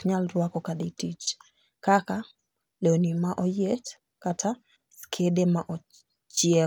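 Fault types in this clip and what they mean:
Nothing in the recording stood out as a problem on listening.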